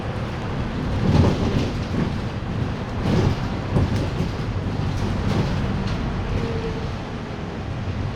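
No technical faults are audible.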